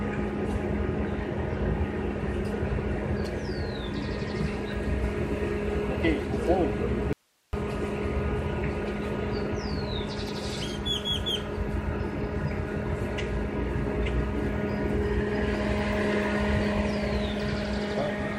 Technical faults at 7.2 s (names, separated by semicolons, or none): audio dropout to a faint residue